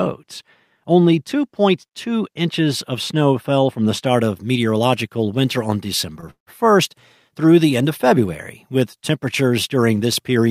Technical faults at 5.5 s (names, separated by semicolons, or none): none